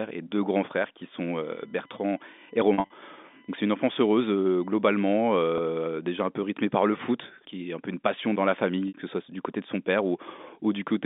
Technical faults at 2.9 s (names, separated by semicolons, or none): USB whine; packet loss with pitch repetition